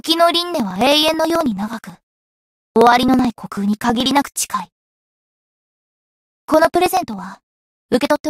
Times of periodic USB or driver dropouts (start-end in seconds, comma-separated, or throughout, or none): 0.54-8.21